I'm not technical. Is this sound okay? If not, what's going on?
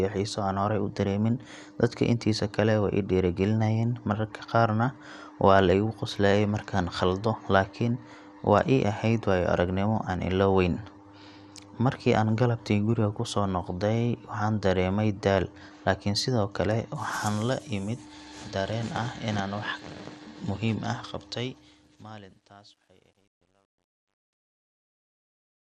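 No. Throughout, the speech was squeezed hard by a digital encoder, likely MP2 compression. Too little data was given to the high frequencies, so nothing remains above 15 kHz. The voice sounds dull, with a gurgling, grainy roughness.

From 21.07 s to the end, the fade-out was processed with too few levels of precision, causing truncation distortion on a fade. The fade is gradual in level, but from about 22.16 s the quiet tail turns gritty.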